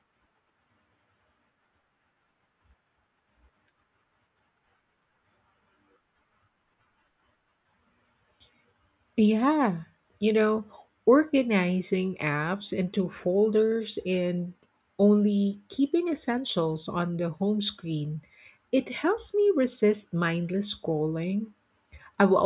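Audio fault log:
No fault is heard in this speech clip.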